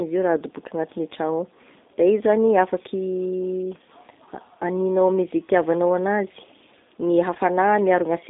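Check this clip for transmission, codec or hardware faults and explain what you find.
Two faults are present: a low-bitrate speech codec across the whole clip, and one brief packet-loss gap near the end.

G.729 codec, throughout: The speech is rebuilt from a vocal-tract filter, a pitch predictor and a few pulses per frame rather than the actual waveform. The band runs roughly 250 Hz to 3.7 kHz, which fits an 8 kbit/s G.729A stream. The voice sounds plainly rough and synthetic.

VoIP packet loss concealed by the speech codec, 7.34 to 7.37 s, just after "itiavanao anazy gne": The decoder filled the missing audio, which sounds like about one 10 ms frame, by extending its last pitch and filter at falling gain. The result is a short, smeared patch, and the voice stays weak or distorted for tens of milliseconds afterwards while the decoder recovers.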